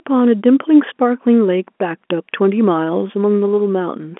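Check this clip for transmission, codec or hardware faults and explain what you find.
No transmission, codec or hardware faults turn up in this speech, which is carried over an ordinary telephone line band.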